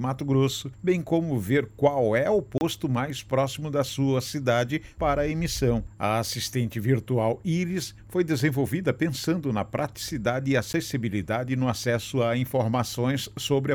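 A short hole opens at 2.58 to 2.61 s, lasting 30 ms, and a single tick follows at 10.73 s, about 10 ms. Each is a block of digital silence: the sound drops abruptly to silence and back without any fade.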